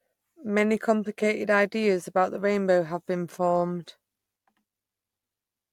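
No technical faults can be heard anywhere in this speech recording.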